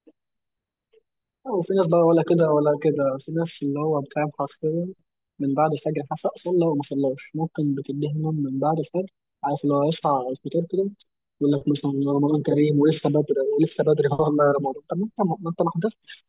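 Aliasing runs through the whole clip. The speech was resampled down without filtering first, which fits a drop to an 8 kHz rate. Content above 4 kHz folds back below it. Sibilants sound gritty and metallic, with false tones roughly 30 dB under the speech.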